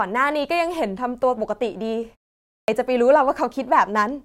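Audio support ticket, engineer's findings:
Speech re-entry at 2.56 s cut off abruptly; onset missing, sound jumps straight in from silence. About 120 ms swallowed, through 2.68 s, following a 0.48 s pause. Clipped start after a pause. Probable component: output device/path power-save. Mechanism: device idles during the pause, needs roughly a tenth of a second to wake and relock, so the first sounds after silence never reach the output.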